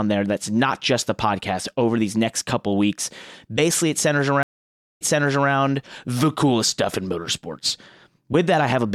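At 4.43 s, just after "it centers", the speech drops into about 0.55 s of silence: a stream reconnect. The connection broke, the player stalled, then rejoined and started a new decoder partway through the stream. When sound returns near 5.50 s on "the coolest stuff in", it has jumped back about 0.52 s, so material already heard is partly repeated, consistent with the server resending a burst. The first frame or so comes in muted or fading up.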